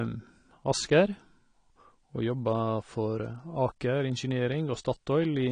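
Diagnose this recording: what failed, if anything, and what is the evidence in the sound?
Dull, smeared speech, fizzy on sibilants throughout, with nothing above 9.9 kHz: likely AAC compression at the codec stage, where a roughly 32 kbps AAC-LC encode discards spectral detail.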